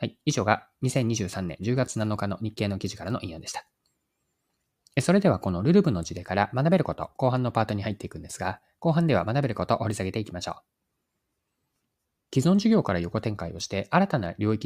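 No technical faults can be heard anywhere in the recording.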